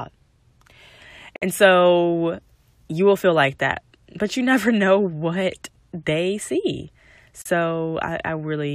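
Speech clip with a gap at a join of encoded pieces: silence drops in at 1.36 s (57 ms) and again at 7.42 s (37 ms), six seconds apart. It's encoder delay and end padding left untrimmed where separately encoded chunks were butted together, so the sound cuts out and resumes right where it stopped.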